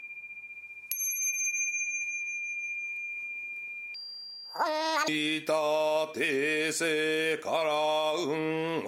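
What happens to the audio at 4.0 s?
At 4.0 s you're inside a section at the wrong speed, running from about 3.94 s to 5.08 s. That stretch plays back at 1.98 times its proper rate, so it rushes by and everything jumps up in pitch by about 10 semitones, since speed and pitch move together here. It sounds squeaky and hurried, then snaps back to normal at 5.08 s. The likely cause is that span being resampled or clocked at roughly double the right rate.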